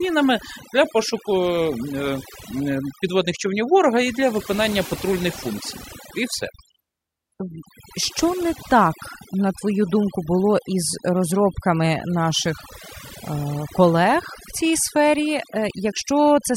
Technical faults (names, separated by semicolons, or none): overdone noise removal